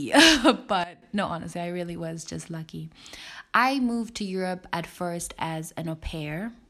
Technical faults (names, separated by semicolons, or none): sudden gain jump